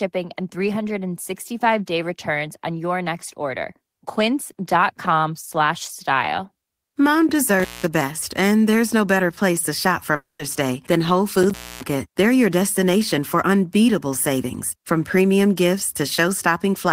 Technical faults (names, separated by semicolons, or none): intermittent contact; long network dropout